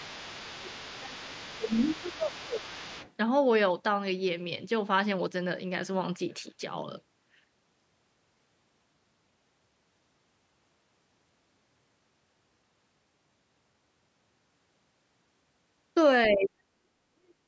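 From 0.0 to 0.76 s, and again from 1.0 to 1.36 s and 1.58 to 2.98 s, the talker's level dips by roughly 15 to 20 dB. This is speech suppressed in double talk, likely an echo canceller pulling down both voices while both sides speak. Underneath, from 0.04 to 2.61 s and 2.81 to 3.12 s, a faint second voice about 20 dB below the talker comes through. This is the other side's voice leaking through, likely loudspeaker echo the canceller didn't fully remove. It returns briefly at 16.26 to 16.35 s, about 15 dB down. From 16.32 s to the end, the talker is suppressed again, far more deeply, by around 40 dB.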